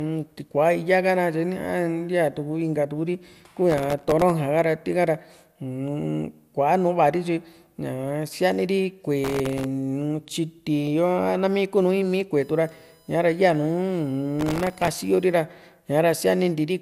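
The whole clip of speech has a swirly, hollow, smeared quality, with attacks blurred and nothing above 16.5 kHz. That's generation loss, likely from the audio being run through a lossy codec several times over, and the character points to repeated MP2 passes around 128 kbit/s.

From 3.70 to 4.30 s, and again from 9.24 to 9.64 s, there's processor overload crackle, a gritty tearing riding on the sound. The processor kept missing deadlines, so dozens of tiny buffers were filled with stale audio, which fits buffers well under a millisecond long.

From 12.41 to 15.33 s a fixed-pitch USB whine comes in, with a 1 kHz fundamental and harmonics that are strongest up at 19 kHz, at about 35 dB below the signal. It's the bus's 1 ms frame current leaking in through power or ground. Inside that stretch, from 14.40 to 15.03 s, the overload crackle returns, longer and denser this time.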